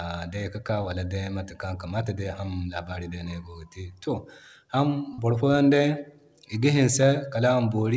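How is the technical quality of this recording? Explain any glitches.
The speech has passed through a call path, and nothing is present above 8 kHz, which fits G.722 at 64 kbps. There are two glitches, both short concealed packet loss. At 0.82 to 0.86 s about 20 ms of audio failed to arrive, and at 5.14 to 5.20 s about 40 ms did. The receiver extended the preceding sound to cover each hole and then crossfaded back, so each glitch is a brief smear or wobble rather than silence. That sets them apart from a hard dropout or click.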